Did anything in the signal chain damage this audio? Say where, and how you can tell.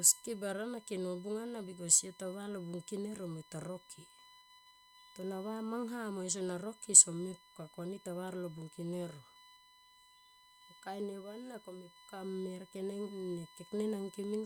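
Yes. There's USB whine running under the speech for the whole clip, a steady fixed-pitch tone at 1 kHz, sitting roughly 25 dB below the signal. That stage is the analogue side: power or ground wiring picking up the bus. USB polls in 1 ms frames, so the current draw pulses at exactly 1 kHz and leaks into the audio path through a shared supply or ground. The pitch never wanders, which is the giveaway.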